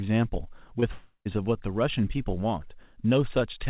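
At 0.80 s a short concealed packet loss smears the speech for about 20 ms. A packet failed to reach the decoder in time, so the receiver stretched the preceding sound over the gap and blended back into the real signal by 0.84 s. It is heard as a brief wobble and is over almost at once. The speech resumes with only about 20 ms missing, far less than in a dropout, where a long stretch of the talk is lost.

From 0.92 to 1.27 s there is a long network dropout. The speech turns into a synthetic continuation of its last sound, a buzz or hiss that decays over roughly a third of a second, followed by about 80 ms of silence. The speech then resumes past the missing part, so the sense jumps ahead. This is most likely a network outage, not a recording gap, because the concealment tail comes before the silence. The band stops at 4 kHz, which fits a G.711 call.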